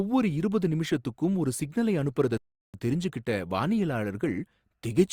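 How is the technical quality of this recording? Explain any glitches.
The recording has one clear glitch, a rebuffering stall. At 2.37 s, right after "இருபது நிமிஷத்துக்கும் ஒரு சிக்னலை", playback stopped because the player ran out of downloaded audio. It then resumed at 2.74 s exactly where it left off, adding about 365 ms of dead silence and losing nothing. The waveform shows a flat line there, and the spectrogram shows an empty vertical band.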